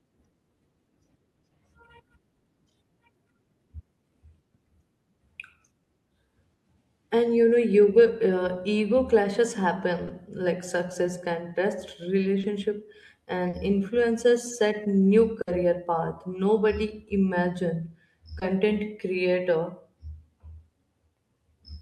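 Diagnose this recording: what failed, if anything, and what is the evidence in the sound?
The failure is in the network stage: packets of this speech arrived too late or not at all, and the receiver's concealment covered the holes. There is short concealed packet loss at 5.83, 8.03, 10.07 (right after "ego clashes"), 12.41 (just after "like success can test"), 13.49 and 18.39 s. Each gap is 20 ms, except the 40 ms one at 13.49 s. Each is a brief smear or wobble where the decoder extended the last pitch period, or shaped noise, and then blended back. That continuation is what separates it from a wiring or buffer dropout, which would leave a hard silence or a click instead.

A longer burst of packet loss hits at 15.41 to 15.49 s, with about 60 ms synthesised. Here several consecutive packets went missing, so the concealment ran long enough to be heard as a held buzz or fading hiss rather than a wobble. 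Speech then resumes slightly further along, with the stretch in between gone. The sustained, decaying fill is what marks it as a burst rather than another short loss. The timing skip afterward rules out a simple level dip.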